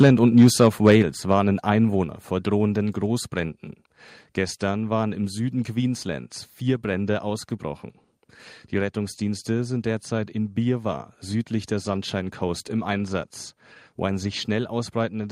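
From 0.38 to 0.95 s the speech shows microphone overload. The loudest syllables drive about 4 dB past the converter's ceiling, and a few percent of samples are flattened at the top, giving a harsh, crackling edge. The likely cause is excessive input gain.

The microphone volume then steps down at 1.02 s, with voice and background dropping together by about 6 dB, and again at 2.04 s, just before "vor drohenden", by about 3 dB. These abrupt level steps are likely the call software reducing the device's input gain after the clipped peaks.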